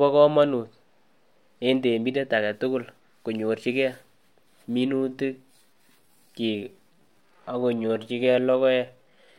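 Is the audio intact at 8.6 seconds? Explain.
No, 8.6 s falls inside a time-stretched section that runs from about 4.87 s to the end of the clip at 9.38 s. The speech suddenly drags to roughly 0.73 times its normal pace while the pitch stays put. That's likely from software stretching the audio to fill a length, holding the pitch by repeating short slices of sound.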